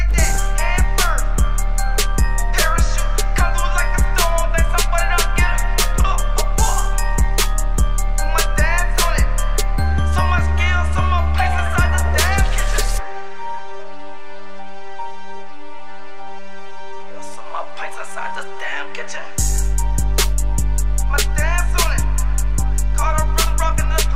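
A constant DC offset of about -20 dBFS shifts the waveform off zero throughout, eating headroom and leaving steady energy at the spectrum's lowest end, though inaudible itself.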